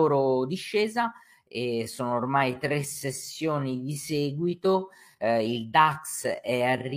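From 1.39 s to the end, the speech turns into a time-stretched section, slowed to about 0.66 times its original pace with pitch unchanged. The change is likely from software lengthening the audio by repeating short segments, which makes the slowed speech drag.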